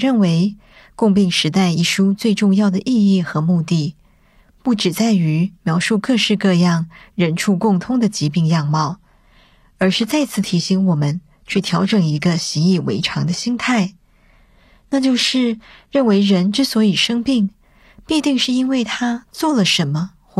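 A speech clip with an adaptive stream at a lower bitrate between 8.50 and 16.50 s: the connection evidently slowed, so the player switched to a much leaner encoding, consistent with a drop from around 96 kbit/s AAC to a roughly 24 kbit/s HE-AAC stream. The quality changes abruptly at both edges, with no gap. The treble turns thin and synthetic and codec artefacts thicken. On a spectrogram the upper band changes texture at those times, with nothing above 15 kHz, while the waveform stays continuous.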